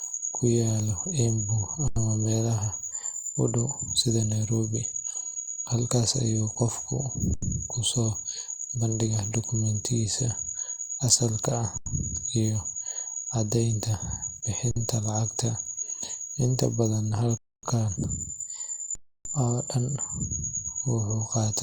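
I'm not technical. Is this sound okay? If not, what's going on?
No. There are two kinds of fault in this speech.

The first is an underrun with held sample. Playback briefly ran out of sound to play, so the audio freezes flat and then carries on where it stopped. Nothing is skipped. It happens at 1.88, 7.34 (just after "ayuu qofku"), 11.78, 14.71, 17.37 and 18.95 seconds. Three pauses last about 85 ms. The last two stretch to about a quarter and almost a third of a second.

The second is a sudden change of speed and pitch, from 2.92 to 3.88 seconds and again from 17.96 to 20.24 seconds. The sound runs about 6% faster and about a semitone higher, then snaps back. The likely cause is a drift correction step: software keeping two clocks in line abruptly changed the playback rate.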